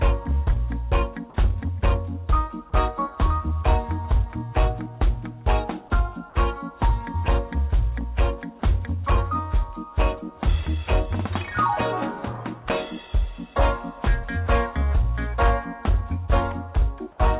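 Nothing's actually wrong here: the audio just has that familiar phone-call ceiling with nothing above 4 kHz, which fits an ordinary G.711 A-law call path at 64 kbps.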